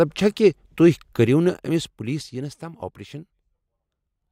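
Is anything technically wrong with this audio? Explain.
Yes. From 1.11 to 2.65 s the speech shows zipper noise: the level drops by roughly 15 dB in unsmoothed 3 dB steps, about three per second. Each abrupt gain jump leaves a small click, so a ticking rides on the speech during the fade.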